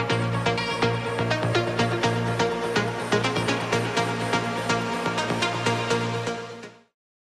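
There are no technical faults to describe in this clip.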